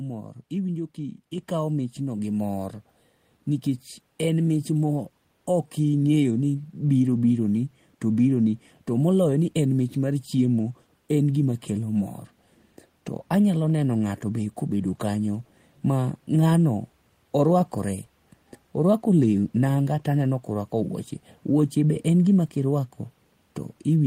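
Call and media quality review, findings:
Microphone volume stepped up at 1.38 s: speech and background noise jump together by about 4 dB in a single step. Probable component is the call client's automatic input gain, raising the capture device level because it judged the microphone too quiet.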